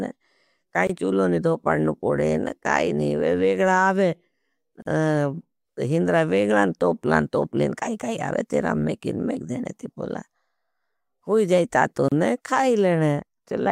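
Speech with gaps at joins of encoded pieces: brief silences at 0.87 s (23 ms), 4.82 s (40 ms) and 12.08 s (32 ms), left by untrimmed encoder delay and padding.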